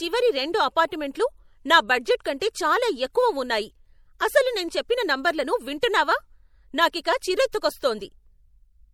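MP3 compression runs throughout this speech clip, plainly audible as a watery swirl, likely from a bitrate near 64 kbps dropping weak frequency lines frame to frame.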